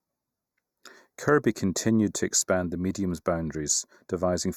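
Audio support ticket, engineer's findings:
Channel delay (comb filtering), present throughout the speech clip. Hollow, phasey top end; one channel lags by a fraction of a millisecond before mono summing, giving fixed notches from around 3 kHz, evenly spaced. Static, unlike flanging; notched rather than smoothly rolled off like a low-pass.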